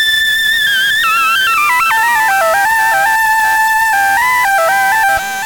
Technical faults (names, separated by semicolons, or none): low bit depth without dither